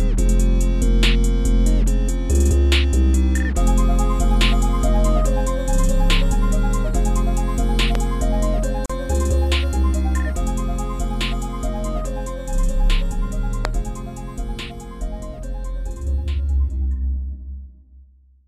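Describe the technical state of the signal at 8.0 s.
A loud pop occurs at 7.95 to 7.97 s, just before 8.0 s: a single sharp click-like thump that peaks roughly 10 dB above the surrounding sound, which continues beneath it. It is likely caused by a brief voltage pulse from a plug, switch, static discharge or driver glitch entering the signal path.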